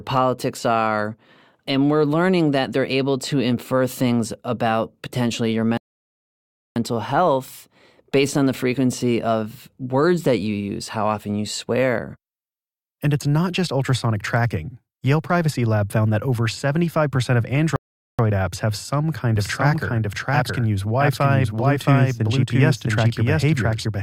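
A rebuffering stall hits at 5.77 s and another at 17.76 s. The player ran dry of downloaded audio, so the speech drops to silence for about 0.99 s and then 0.43 s before resuming exactly where it halted. Nothing is lost, but the pauses stretch the timeline.

A doubled audio track appears abruptly at 19.36 s and lasts to the end. A second full-band copy of the speech trails about 0.7 s behind at roughly the same level, with no decay or room colour. It is likely a slower second capture path or an edit leaving two copies out of step.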